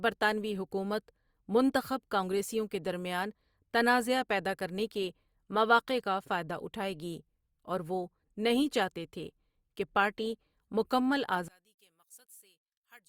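From 11.48 s to the end at 13.09 s, just after "تھے کہ پارٹی مکمل", the speech suddenly drops by about 26 dB and turns faint. The likely cause is one channel inverted. With one stereo side in reversed polarity, everything shared between the channels cancels when they are summed to mono, leaving only their small difference. The waveform shrinks abruptly to a thin trace, and the spectrogram darkens across the band.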